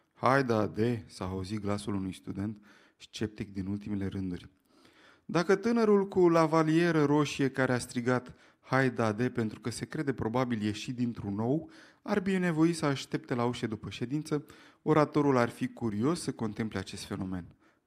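Speech throughout, with no technical fault to report anywhere in the recording.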